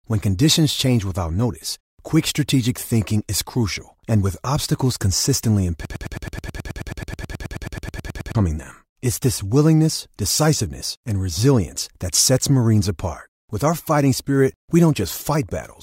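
After "and with obstacles consistently", at 5.85 s, a broken-record loop begins. A 107 ms fragment repeats 23 times until 8.35 s, likely from a stalled stream.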